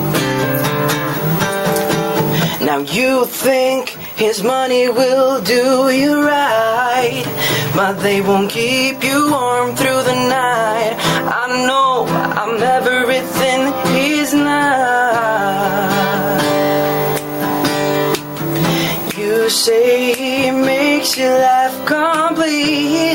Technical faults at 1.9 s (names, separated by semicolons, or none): gain pumping